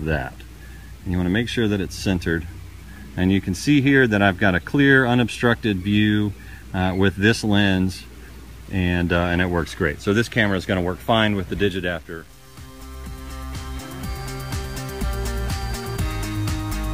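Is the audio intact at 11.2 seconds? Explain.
No. At 11.2 seconds, as across the whole clip, there is low bit depth without dither. The grainy distortion moves with the sound: it roughens quieter passages and makes the faintest parts sputter or drop out, with the error sitting around 35 dB below the signal. That fits the audio likely being truncated to 8 bits, so each sample is cut down to a coarse step. Dithered quantisation would leave a steady, even hiss instead, not grit that follows the sound.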